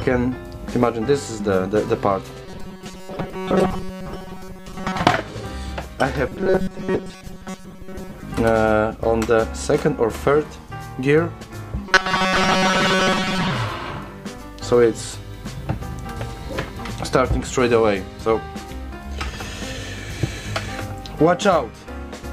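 Likely starved of new audio, the software repeats a 5.3 ms buffer for most of each stretch, producing robotic sound from repeated short buffers: a rigid, metallic 188 Hz buzz from 2.46 to 4.99 s, 6.28 to 8.23 s and 11.87 to 13.50 s.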